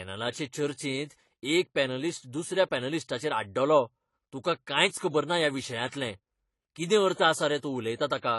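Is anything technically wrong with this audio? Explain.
Yes. The speech is dull and smeared, with a warbling, fizzy edge on sibilants and nothing above 11.5 kHz. This plainly audible damage is likely AAC compression at a low bitrate around 32 kbps, where coarse quantisation blurs detail and cuts off the top band. A spectrogram shows a hard ceiling at 11.5 kHz.

Pre-echo occurs at 5.88 s, just after "ना ह्या", then at 7.14 s and 7.58 s, spreading 44, 45 and 50 ms ahead of each attack. The codec spreads its noise across a whole block, so a short hiss leads each onset. In the waveform, low-level noise sits before each sharp rise.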